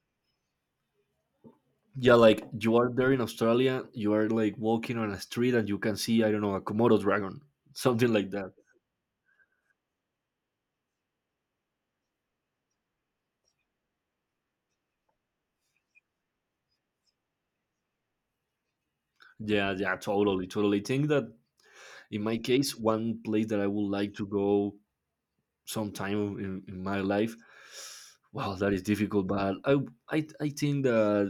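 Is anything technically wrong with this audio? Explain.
No, nothing is technically wrong with this audio.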